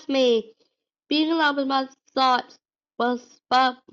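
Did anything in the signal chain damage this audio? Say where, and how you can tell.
No, nothing in this speech recording stood out on listening as damage from any stage of the signal chain.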